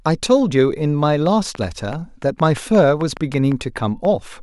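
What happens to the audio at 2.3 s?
At 2.3 s a train of clicks, running 1.26 to 4.06 s, ticks irregularly about 4.7 times per second, peaking about 5 dB above the speech. It is likely interference, and the clicks repeat in much the same shape rather than forming random crackle.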